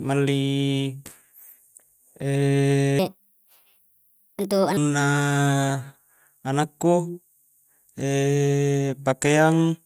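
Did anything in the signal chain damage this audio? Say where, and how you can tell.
Yes. Between 2.99 and 4.77 s the speech jumps up in pitch and hurries along, then drops back to normal, a wrong sample rate fault at the playback stage. Tempo rises by a factor of 1.38 and pitch by about 5.5 semitones, locked together, which fits material recorded at 32 kHz being clocked out at 44.1 kHz with no resampling. Because the samples themselves are unchanged, only their timing, the whole spectrum shifts upward by that same ratio.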